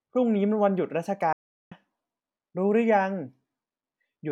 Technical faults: playback stall

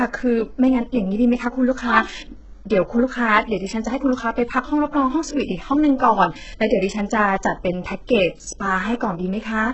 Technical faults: HE-AAC compression

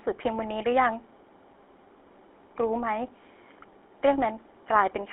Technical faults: GSM full-rate codec

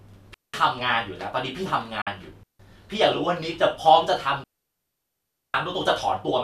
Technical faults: digital wireless dropout; digital broadcast dropout

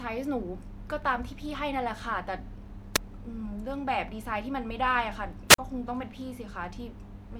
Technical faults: wireless microphone squelch dropout

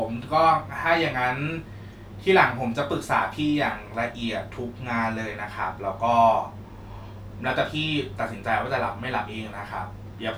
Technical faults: none

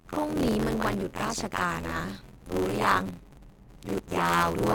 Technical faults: buffer tearing

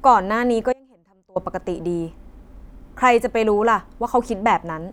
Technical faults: audio dropout to a faint residue

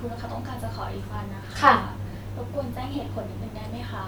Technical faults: none

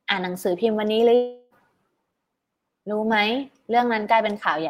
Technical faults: long network dropout

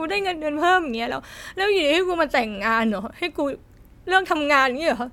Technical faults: none

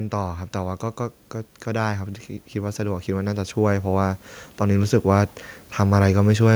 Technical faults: automatic gain rising

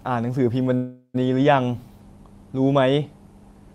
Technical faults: call audio freeze

